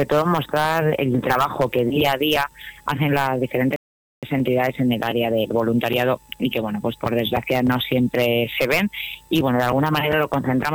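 At 3.76 s a playback stall cuts the sound to silence for about 0.47 s, likely starved data or a blocked player thread; waveform and spectrogram show a flat blank gap.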